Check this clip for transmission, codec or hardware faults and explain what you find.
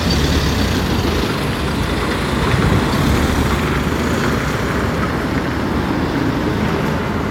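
No transmission, codec or hardware faults are audible.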